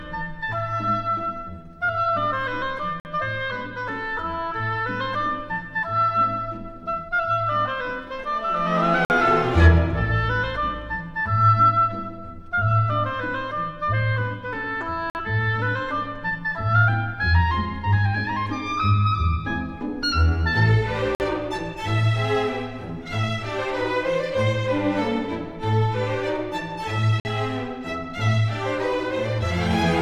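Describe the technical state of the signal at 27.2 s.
A 50 ms hole of silence cuts in from 27.20 to 27.25 s: a gap between chunks, where silence is left at the join between 6-second chunks.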